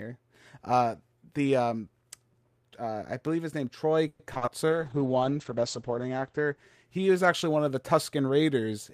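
A speech clip with repeated packet loss (robotic sound) from 4.07 to 4.49 s: four gaps, the longest 120 ms, about half the span patched by concealment, showing as chopped, smeared waveform blocks. Then a call bitrate drop from 4.69 to 7.88 s, 48 to 9 kbps, bottoming out for about 1.4 s, making the speech muffled and watery, with the spectrogram's upper band cut from 20 kHz to 8 kHz.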